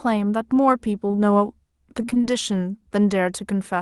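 Short concealed packet loss occurs three times in a row, at 1.07, 1.11 and 1.15 s, running through to 1.19 s. In each 40 ms span, about 20 ms of the call audio arrived too late for the decoder. The receiver covered each hole by extending the preceding sound, using its pitch for voiced parts or shaped noise for unvoiced ones, and then blended back into the real signal. The result is a quick smear or wobble, and a brief consonant in that stretch may drop out.

Repeated packet loss (robotic sound) follows from 2.01 to 2.25 s. Six separate gaps hit this quarter-second, the longest about 27 ms, and concealment fills half of the span. Each patch continues the last sound just before the next gap arrives, so the audio turns choppy with fragments missing. The call codec's top end stops around 12 kHz, which fits Opus running at a modest voice bitrate.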